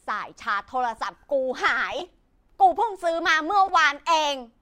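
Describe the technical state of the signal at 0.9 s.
At 0.92 s the speech is hit by a corrupt frame decoded fault lasting until 0.95 s, roughly 37 ms. Flipped bits in the compressed data reached the decoder, which played the damaged frames anyway. Misread gains and codes put energy at the wrong frequencies. The span covers about three frames. It sounds like a brief squeaky blip laid over the speech. The stray energy peaks at about −30 dBFS.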